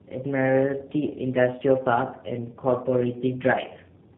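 Tandem speech coding runs through the whole of this speech clip: the call was decoded and re-encoded at a network border, so a second low-rate speech coder had to model the first one's already damaged output, which fits two passes of G.729A at 8 kbit/s joined by a G.711 A-law link. The result sounds rough, muffled and warbly throughout, with nothing above 3.8 kHz.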